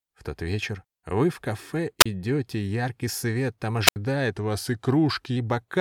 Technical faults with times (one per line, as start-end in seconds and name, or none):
2.00-2.06 wireless microphone squelch dropout
3.86-3.96 wireless microphone squelch dropout
4.31-5.37 drift correction step